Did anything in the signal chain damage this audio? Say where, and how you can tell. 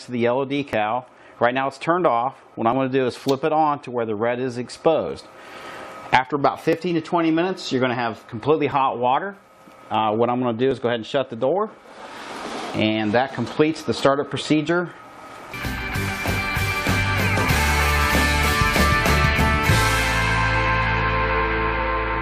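Yes, an overlap between stream segments at playback: tiny skips at 0.73, 2.73, 4.74, 6.73, 8.72, 10.71, 12.70 and 14.69 s, each 2 s apart, where 10 to 20 ms of sound gets trimmed.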